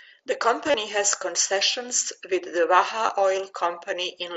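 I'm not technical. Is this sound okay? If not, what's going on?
No. Concealed Bluetooth headset packet loss at 0.66–0.74 s, just before "has concessions with the", and again at 3.07 s, right after it. Bits of audio between headset and phone went missing, and the phone patched each gap by repeating the last moment of sound, causing brief buzzy blips.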